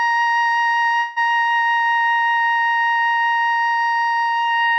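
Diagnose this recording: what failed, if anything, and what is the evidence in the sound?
A call audio freeze from 0.99 to 1.18 s, at the network stage: the music stalls into a fading continuation of its last sound for about 170 ms, then resumes where it stopped with nothing lost, 170 ms late. Likely delayed packets draining the jitter buffer.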